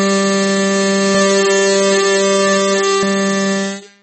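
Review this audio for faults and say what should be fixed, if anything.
The whole clip has a dull, watery sheen: nothing comes through above 8.4 kHz, and the upper detail swirls and chirps as weak components flicker in and out from one frame to the next, with attacks smeared soft. That's plainly audible and most likely MP3 compression at a very low bitrate, something around 32 kbps. At that rate the encoder lops off the treble and drops whatever its hearing model rates as least important. To prevent it, export or stream at a much higher bitrate, or keep a lossless copy for review.

From 1.15 s to 3.03 s there's a doubled audio track: a second full-band copy of the music trailing roughly 0.7 s behind, at about the same level as the original. It has no decay or room colour, and it cuts in and out abruptly at those two points. The cause is likely the same audio getting mixed in a second time, either through a slower capture path or an edit that left two copies out of step. 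To prevent it, make sure only one path feeds the mix, and check edits for leftover duplicate regions.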